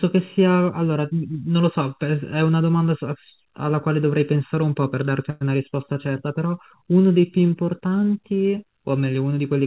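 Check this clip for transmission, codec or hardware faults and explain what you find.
Two faults stand out in this speech, heard over a call path that carries nothing above 4 kHz.

Channel delay (comb filtering) runs through the whole clip. One channel arrives late by a little under a millisecond, and when the two are summed to mono, the shared sound cancels at evenly spaced frequencies, the first around 700 Hz. The result is a hollow, phasey colour. Unlike the plain dullness of the call's band limit, this comes from fixed notches repeating up the spectrum, not a single cut-off at the top.

A call audio freeze occurs from 5.3 to 5.43 s. The delivery stalled, likely because packets were held up and the jitter buffer ran dry. For about 107 ms the receiver filled the gap by extending the last sound as a fading buzz or hiss. When the audio resumes, it picks up exactly where it stopped, so nothing is lost and the rest is simply pushed later. 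That distinguishes it from a dropout, where a piece of the audio would vanish and the sound would skip ahead.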